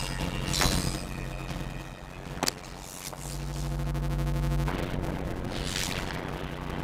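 From start to finish the audio has a block size mismatch (padded): one stage writes shorter blocks than the next stage reads, and the shortfall in each block is filled with silence. The result is a steady buzz at 91.9 Hz, the block rate, and playback slowed to 0.533 times normal speed at roughly the original pitch. That ratio fits 256-sample blocks being written into reads of about 480 samples.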